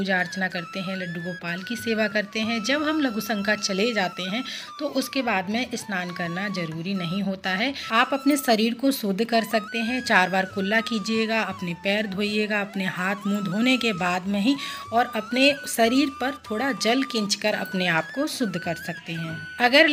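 Nothing stood out as a technical problem on listening.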